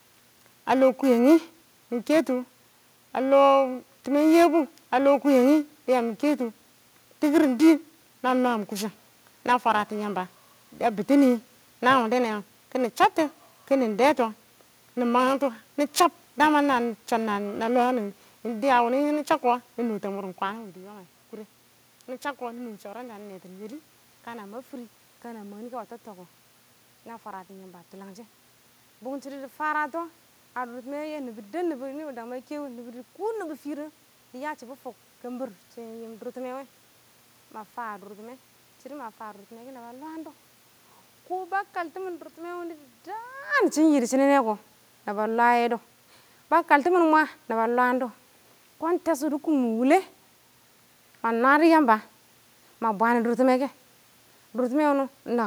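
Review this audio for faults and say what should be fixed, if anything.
From 0.0 to 24.4 s there is periodic clock jitter: interference near 2 kHz modulates the converter clock, adding sidebands that give the speech a rough, metallic edge. Shield and filter the clock supply.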